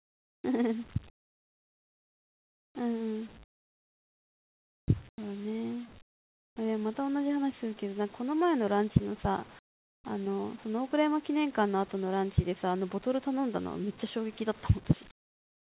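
Pauses at 0 to 0.44, 1.1 to 2.75, 3.44 to 4.88, 5.09 to 5.18, 6.02 to 6.56, 9.59 to 10.04 and 15.11 s to the end turn into flat, featureless hiss, likely comfort noise in place of the background. The sender seems to stop transmitting in the gaps, so the receiver invents smooth noise instead of the real room tone. The level jumps about 6 dB louder in the first gap, then drops about 4, 1, 10, 19, 29 and 23 dB in the others. Everything, hiss included, stops at 4 kHz, which fits a narrowband call codec.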